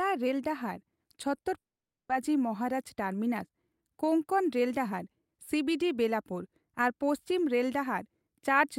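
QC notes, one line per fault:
1.35–1.39 s and 1.41–1.45 s, short concealed packet loss: two holes of 20 ms each, about 20 ms apart, where audio failed to arrive and the receiver extended the preceding sound to bridge them before blending back into the real signal. Each is heard as a brief smear or wobble rather than a gap. Unlike a dropout, no silence follows; the patched sound simply runs on and the stream resumes almost at once.
1.57–2.11 s, long network dropout: about half a second of audio, roughly 520 ms, is missing, likely because the network stopped delivering it for that stretch. The receiver continues the last sound only briefly before it fades, and then about 500 ms of near-silence remains before the audio returns further along, with the lost part never heard. What separates this from the short concealment just before it is that sustained silence: the fill cannot cover a gap this long.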